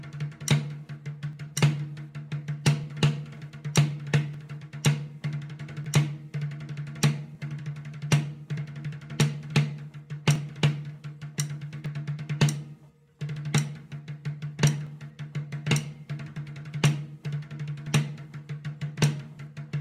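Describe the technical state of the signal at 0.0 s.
The signal at 0.0 s is intact, with no technical fault present at that moment.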